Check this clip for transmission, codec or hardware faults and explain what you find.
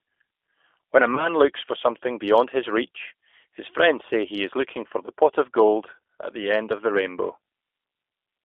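Two faults are audible: G.729 coding across the whole clip and one concealed packet loss.

G.729 codec, throughout: the speech sounds band-limited to about 300 Hz to 3.5 kHz. The decoder rebuilds each 10 ms frame from a vocal-tract filter, pitch predictor and a few pulses, consistent with an 8 kbit/s G.729A link. This leaves the voice plainly rough and synthetic.

VoIP packet loss concealed by the speech codec, 1.15 to 1.29 s: a gap of about 20 ms, pointing to a single lost packet, was filled by the decoder extending its last pitch and filter at falling gain. This smears the sound into a brief fade, and the voice stays weakened until about 1.29 s.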